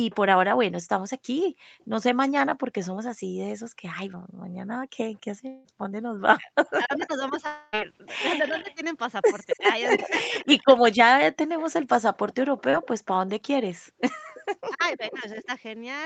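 Speech heard through a call path that stops at 8 kHz, with several faults. An echo leak appears at 0.1 to 0.16 s, 1.8 to 2.87 s, 6.66 to 6.71 s and 8.47 to 15.48 s: a copy of the far side's sound trails by 272 ms. It sits about 25, 30 and 35 dB down in the first three stretches and only about 10 dB down in the last, long one. The likely cause is a loudspeaker whose echo canceller let part of its pickup return. Background gated by the echo canceller affects the span from 1.57 to 5.83 s. The room tone is pushed down by as much as about 40 dB for roughly a second and a half in total, then recovers, as the canceller clamps the microphone while the loudspeaker plays. A long network dropout occurs at 5.47 to 5.66 s and again at 7.46 to 7.75 s. The last sound is stretched into a fading buzz for 171 ms and 262 ms, and the audio resumes with that material gone, likely because packets stopped arriving. 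Speech suppressed in double talk occurs between 6.35 and 10.83 s and between 14.68 and 15.45 s. The near talker dips by up to about 20 dB and then about 15 dB while the other side speaks, likely because the canceller turned both down when it could not tell them apart. A short concealed packet loss at 12.71 to 12.75 s leaves a brief smear where about 20 ms of missing audio was patched by extending the preceding sound.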